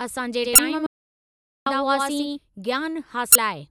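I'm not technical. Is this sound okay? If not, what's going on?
No. From 0.44 to 2.39 s the speech has a doubled audio track: a second, quieter copy trails about a tenth of a second behind, giving a slapback echo that starts and stops abruptly. This is likely a second recording path running late.

At 0.55 to 0.59 s and again at 3.32 to 3.36 s there are short chirps or blips. These come from damaged data in a compressed stream: part of the file was corrupted, so the player briefly misread it.

From 0.86 to 1.66 s, about 0.8 s, the sound cuts out to dead silence with no background at all. This is an audio dropout to silence, likely caused by the input briefly disconnecting while recording continued, and whatever was said then is lost.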